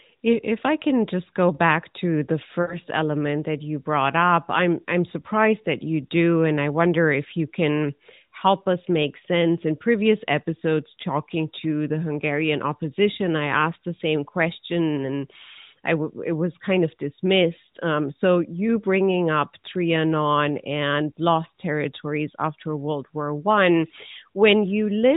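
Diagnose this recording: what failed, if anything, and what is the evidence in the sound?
Lost AMR speech frames at 2.62 to 2.77 s, between "go back to the" and "element that you brought", a network-stage fault. About 60 ms of sound smears and fades, which fits three failed 20 ms frames, with the narrowband decoder repeating its last pitch and vocal-tract settings at falling gain.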